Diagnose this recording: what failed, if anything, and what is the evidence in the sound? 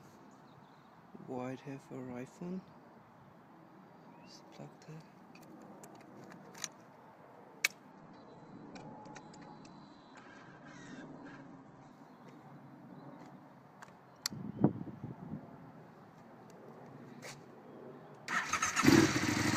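Network: the connection slowed, so an adaptive stream at a lower bitrate played from 7.92 to 11.92 s. The spectrogram abruptly empties above 8.4 kHz, with no gap in the waveform.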